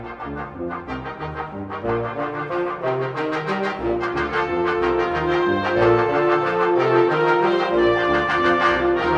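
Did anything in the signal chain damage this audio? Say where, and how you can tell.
No, nothing in the signal chain damaged it.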